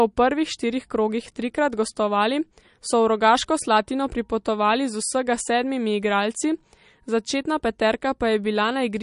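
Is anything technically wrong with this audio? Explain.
Yes. Throughout the speech there's plainly audible MP3 compression, likely from a low bitrate around 40 kbps. Nothing survives above about 10.6 kHz, so the top end is cut off. Starved for bits, the encoder drops weak frequency lines that flicker frame to frame, giving a watery, swirly texture with chirpy sibilants and smeared attacks.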